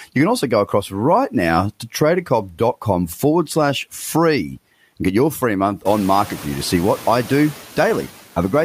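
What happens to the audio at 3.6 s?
Noise suppressor artifacts are present at 3.6 s, as throughout the clip: background noise is pulled down about 11 dB between phrases, then rises under speech.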